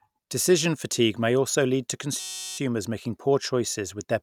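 From 2.20 to 2.58 s, after "may also lead to", a system hang loop repeats one 5.33 ms slice, which fits a 256-sample buffer, producing a steady 188 Hz buzz. Unlike a dropout, nothing seems skipped: speech resumes at "making poor".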